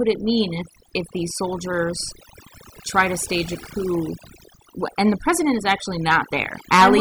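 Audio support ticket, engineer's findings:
Overdone noise removal, whole clip, 0 s to end. Noise-reduction stage set too aggressive: bands near its noise estimate are gated to near zero, taking quiet speech detail with them. Background drops and breaks up into twinkling specks. Unlike low-bitrate codec smearing, gaps between phrases twinkle rather than swirl.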